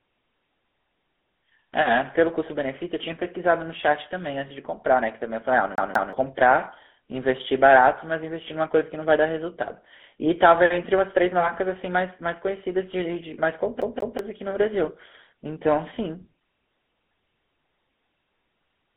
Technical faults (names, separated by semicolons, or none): GSM full-rate codec; lost GSM frames; CD stuck on one turn